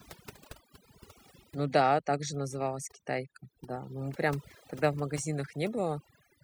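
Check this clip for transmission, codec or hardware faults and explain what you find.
One fault runs through the whole clip: overdone noise removal. From start to finish the background is pulled down and broken up into twinkling, warbling specks. A noise reduction stage set far too aggressively is at work, cutting individual frequency bands down or out whenever they come close to its noise estimate. Quieter components of the speech fall below that threshold and vanish with the noise, leaving isolated bands that flicker on and off.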